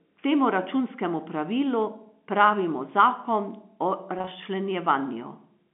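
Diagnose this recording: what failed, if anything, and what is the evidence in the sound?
Just after "pravilu pravimo zakon o", a buzzy held stutter at 4.19–4.27 s points to network packet loss with pitch repetition: 60 ms of short gaps were filled with repeated pitch periods.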